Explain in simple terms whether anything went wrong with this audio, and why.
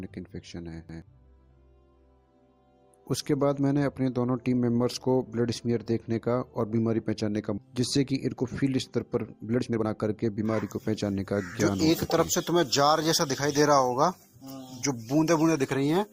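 At 7.57 s the audio jumps forward with no pause or filler: a skip ahead. Roughly a second of sound is simply missing, and the two sides are stitched together directly. Unlike a dropout, there is no silence; the sound just lurches ahead in time.

Right after, from 8.13 to 8.77 s and again from 9.22 to 11.20 s, the sound runs fast: a jitter buffer speed-up. The receiver had too much audio queued, so it trimmed tiny slices to catch up, about 7% faster, then 20% faster, removing almost half a second in total. The pitch stays the same, so it sounds hurried rather than squeaky like a sped-up tape.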